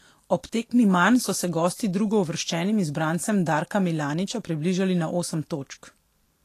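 Throughout, the speech sounds hissy and grainy, consonant onsets are smeared, and nothing remains above 14.2 kHz. The likely cause is Vorbis compression at a low bitrate, near 37 kbps, quantising the treble so coarsely that fine detail turns into noise.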